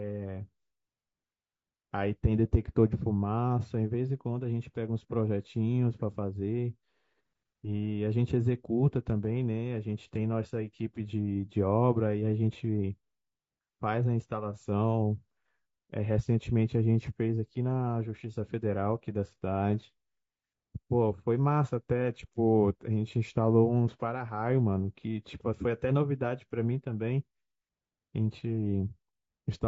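Throughout the speech the voice sounds rough and grainy, with a noisy fill between the pitch harmonics and a thin, synthetic-sounding top band. This is likely low-delay AAC compression, with short frames smearing the harmonics, consistent with AAC-ELD at around 32 kbps.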